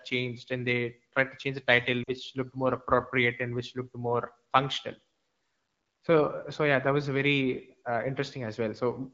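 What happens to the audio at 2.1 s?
Lost AMR speech frames: from 2.04 to 2.11 s, between "to change the title" and "looked more appropriate and", about 40 ms of speech fails to arrive intact. The AMR-WB decoder fills the hole by repeating its last good pitch and vocal tract settings at falling gain, so the sound fades to near silence within the two frames instead of cutting to hard silence. That decoder-made fade is what sets it apart from a plain dropout, which would leave a clean gap.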